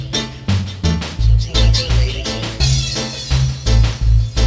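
No technical faults are audible.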